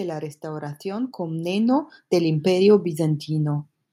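From 0.41 s to 3.74 s the level climbs steadily by about 10 dB: automatic gain rising, where the gain control judged the input too quiet and kept raising its gain over more than three seconds. The speech and the background noise swell together at the same rate. That shared rise tells it apart from a talker moving closer to the microphone, which would lift the voice while leaving the room noise roughly where it was.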